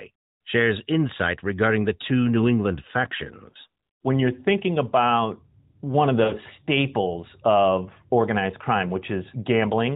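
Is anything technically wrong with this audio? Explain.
Yes. Lost AMR speech frames occur twice: from 3.50 to 3.57 s and from 6.24 to 6.34 s. The gaps are consistent with about two and three missing 20 ms frames. The decoder conceals each loss by repeating the last good pitch and vocal tract settings at reduced gain. The result is a short smeared, drawn-out patch that sags in level, longer and weaker at 6.24 s, before the narrowband voice, band-limited below 4 kHz, returns rough for a moment.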